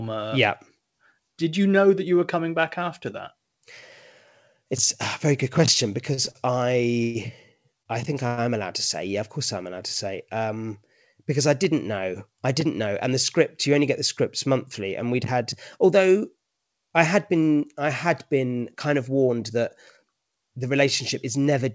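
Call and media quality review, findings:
Repeated stalls (stutter), 6.14–8.39 s, after "a very good question", before "am allowed to say": jitter buffer underran six times, receiver stretched the last sound across each gap (longest 120 ms, about 15% of the span). Nothing lost, but the audio drags.

Jitter buffer speed-up, 12.64–14.47 s after "I didn't know I" and 19.30–20.04 s after "had been kind of": buffer overfilled, receiver trimmed pitch periods (roughly 70 ms and 40 ms). Runs about 4% fast at the same pitch.

Call path: band stops at 8 kHz, consistent with a 64 kbps G.722 wideband codec.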